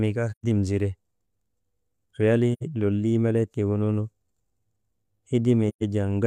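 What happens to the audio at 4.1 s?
Nothing goes wrong at 4.1 s; the audio there is intact, with no dropout, click or distortion.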